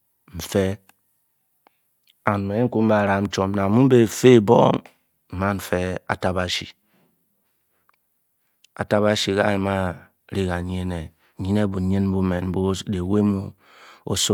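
No technical faults are audible.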